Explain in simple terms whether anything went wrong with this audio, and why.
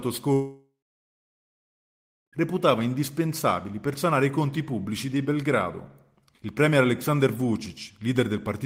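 A long network dropout likely interrupted the stream from 0.33 to 2.41 s. The sound fades into near-silence, then returns with about two seconds lost.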